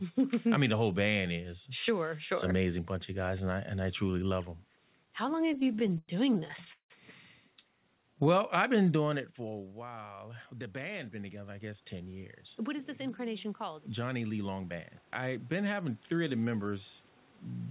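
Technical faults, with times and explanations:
5.46–6.92 s, repeated stalls (stutter): The sound halts and restarts 24 times, with the last sound stretched to fill about 520 ms (36% of the span), the longest wait 173 ms. Nothing is lost, but unlike a smooth slow-down, the flow is choppy and broken.
8.15–8.40 s, jitter buffer slow-down: The receiver repeats single pitch periods to rebuild its reserve, adding 36 ms and running at 89% speed. The pitch holds and there are no halts, so this is a brief smooth drawl rather than a stutter.
9.39–15.97 s, automatic gain rising: After the talker moves back from the microphone around 9.0 s, the input falls about 16 dB, and the gain control slowly brings back about 12 dB. Unlike a talker returning closer, the room noise swells along with the voice.
10.53–11.94 s, jitter buffer speed-up: The receiver cuts short pitch-period pieces, roughly 150 ms in total, to shrink excess delay, running at 110% speed. 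The pitch stays the same, so the audio sounds hurried and clipped in timing rather than raised or tape-fast.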